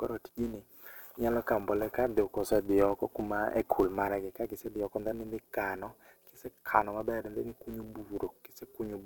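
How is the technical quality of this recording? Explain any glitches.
The quality is held back by one steady glitch. A filter restarted on every block runs through the whole speech clip, resetting its state each time a block starts at about 172 per second, which fits a 256-sample block. Each restart leaves a tiny tick, so together they form a 172 Hz buzz that swells and fades with the loudness of the speech.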